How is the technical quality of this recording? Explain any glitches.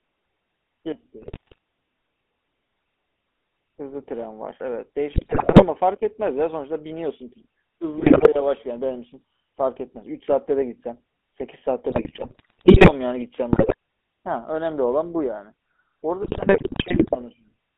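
The quality is poor. The speech is narrowband and gravelly throughout, and it breaks up at six points.

A constant buzzy, rough texture sits on the speech, confined to roughly 250 Hz to 3.5 kHz. That is the GSM full-rate codec at work. It models the vocal tract and drives it with a sparse, regularly spaced pulse excitation, which fits a 13 kbps GSM full-rate link.

Squawks, pops and gargling bursts hit at 1.22–1.58 s, 5.12–5.65 s, 7.98–8.28 s, 11.9–12.93 s, 13.53–13.74 s and 16.22–17.17 s. These are GSM bit errors. Corrupted filter, pitch or gain values reach the decoder, so affected frames get a warped spectrum or sudden level jumps.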